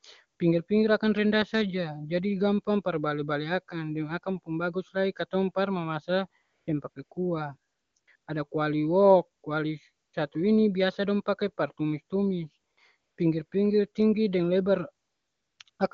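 Speech clip with AMR comfort noise in fourteen gaps from 6.41 s (after "lai katong par mamasa") to 15.79 s, each 20 to 540 ms long, where the phone stopped sending speech frames and the receiver substituted smooth synthetic noise. On a spectrogram these gaps show as flat, featureless bands.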